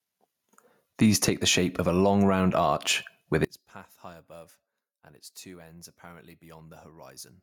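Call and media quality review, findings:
Gain pumping, whole clip: input gain likely set far too high, with a fast limiter clamping every loud syllable. Gain swinging around 10 dB; loud and soft passages squashed together.

One channel inverted, 3.45 s to end, right after "long round arch with": polarity likely reversed on one stereo leg. Mono sum cancels the shared centre content, dropping the speech about 30 dB to a faint residue.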